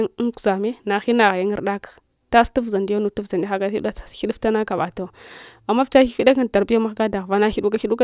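Speech recording with no technical faults to report.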